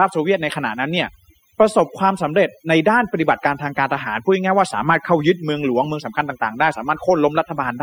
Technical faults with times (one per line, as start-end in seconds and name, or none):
0.00-7.83 overdone noise removal